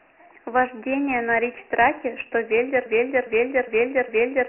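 From the first moment, the speech carries Dialogic VOX ADPCM coding. Each sample is squeezed to 4 bits, and the 24 kbps rate fits 6,000 samples a second. Nothing is heard above 2.9 kHz. The damage is heavy, with gritty hiss trailing the speech.

At 2.86 s a broken-record loop starts and runs to the end. A 408 ms fragment repeats exactly, back to back, four times. The likely cause is a stalled player or stream resending its last buffer. The speech that belonged there is lost.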